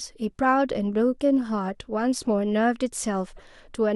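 Speech with a corrupt frame decoded near the end, from 3.35 to 3.42 s: damaged compressed data was played anyway, spreading a chirp or squeak of misplaced energy over what sounds like about three frames, peaking around -40 dBFS. Unlike a dropout or concealed gap, the damaged frames are still played, with energy at the wrong frequencies.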